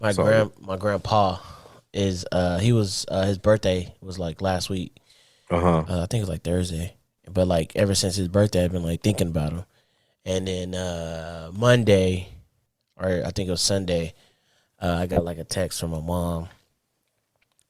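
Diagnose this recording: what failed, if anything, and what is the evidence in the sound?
A Bluetooth stutter at the wireless link: packets arrived late or not at all, so the receiver looped its last buffer. From 15.13 to 15.20 s a short slice repeats as a brief buzz, then the speech jumps ahead to "like a text from", which fits about 30 ms lost across two packets.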